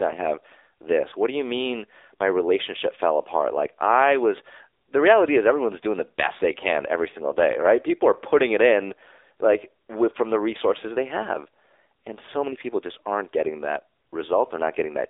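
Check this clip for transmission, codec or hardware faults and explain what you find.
One fault runs through the whole clip: an AMR narrowband mobile codec. The speech is confined to roughly 300 Hz to 3.7 kHz, with nothing above 3.7 kHz. The codec damage is plainly audible, a buzzy, synthetic edge that fits a low rate near 7.4 kbps. AMR-NB rebuilds speech from a vocal-tract model fed by sparse pulses, which gives that artificial texture. A plain telephone band-limit or low-pass filter would leave the speech dull but natural.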